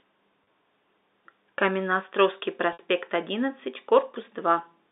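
Speech over a G.711 telephone channel, limited to roughly 250 Hz to 3.7 kHz, has two instances of packet loss with pitch repetition. At 0.44–0.46 s about 30 ms of audio is missing, and at 2.73–2.79 s about 60 ms, which fits three and six lost packets. The receiver bridges each gap by repeating the last pitch period and fading it out. At the first gap the sound holds briefly and turns buzzy before the speech resumes; the longer second gap fades into silence and the speech returns with a short cross-fade.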